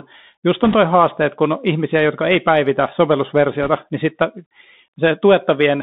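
Bluetooth CVSD headset codec, throughout the speech: the sound is confined to a band of roughly 150 Hz to 3.7 kHz, which fits a 64 kbit/s CVSD stream. The coder sends one up-or-down bit per sample and adapts its step size. It can't keep pace with sudden loud, high-frequency energy, so sibilants come out scratchy and slope-overloaded, and a fine granular hiss sits beneath the speech.

Bit errors on a Bluetooth voice link, from 0.64 to 0.75 s and again from 3.63 to 3.70 s: flipped bits in the CVSD stream, at a rate of around 2 percent, briefly cover the speech with a rushing, crackly noise. Each bit nudges the output only one step, and the error fades as the coder's step size readapts. So instead of sharp clicks, each burst sounds like a short smear of gritty static.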